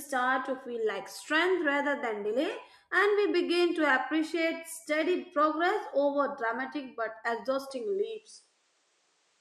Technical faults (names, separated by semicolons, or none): input switched to a poorer device